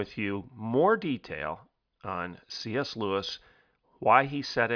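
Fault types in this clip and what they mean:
Nothing stands out as a technical fault anywhere in this bit of speech, so there's really nothing here to flag.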